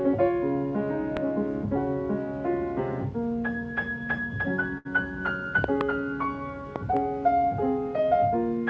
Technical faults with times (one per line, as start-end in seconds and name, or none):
1.17-1.19 loud pop
4.78-4.87 short stall from a late packet
5.64-5.83 loud pop
6.76-6.99 loud pop